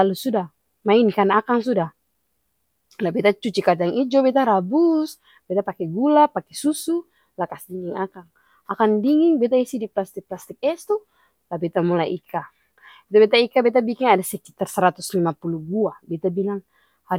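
No technical faults are audible.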